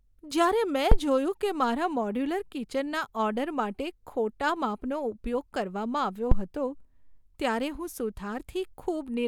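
Phantom power was switched on or off on a live input, and the voltage step passed through the coupling capacitors. The result is a phantom power thump at 0.92–0.99 s, just before "જોયું કે મારા મોડ્યુલર", peaking near -6 dBFS and decaying in 17 ms. Another comes at 6.31–6.46 s, after "કરવામાં આવ્યો", near -7 dBFS and decaying in 33 ms.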